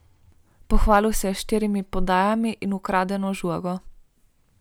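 Speech with hard clipping from 0.74 to 0.96 s, just before "se je": peaks pushed about 2 dB past the ceiling are sliced flat, giving brief crackle, not soft saturation's rounded warmth.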